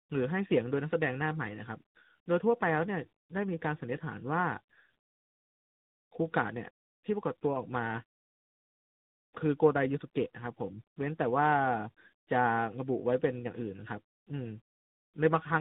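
From start to finish the speech shows tandem speech coding. The signal sounds as if it passed through two low-rate speech coders in series, which fits an ADPCM stage such as G.726 followed by AMR-NB, with a G.711 link between them. The second coder works on the first coder's degraded output, so the errors compound. Nothing is present above 3.8 kHz, which muffles the consonants. The voice sounds rough and grainy, with a warbly, watery quality.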